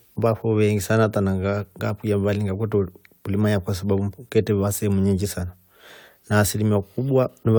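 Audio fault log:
No technical faults can be heard anywhere in the speech recording.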